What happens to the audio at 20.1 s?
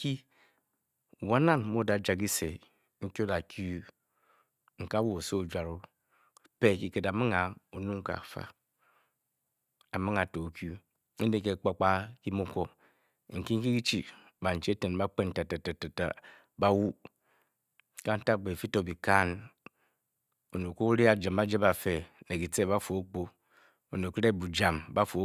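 Nothing goes wrong at 20.1 s: the speech carries on intact through that moment, with no dropout, click or other audible fault.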